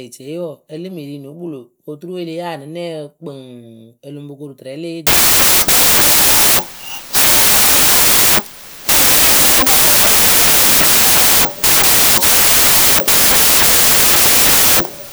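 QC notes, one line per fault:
5.07–15.12 s, wrong sample width: from just after "koru tɨrɛ le eyee" to the end, the speech collapses into loud, harsh noise with the original only faintly audible beneath it, running about 1.5 times too fast and pitched up. Audio stored as 16-bit samples is being read as packed 24-bit, so each value straddles mismatched bytes. Only some keep the true signal's top bits, and taking three bytes per sample instead of two speeds everything up.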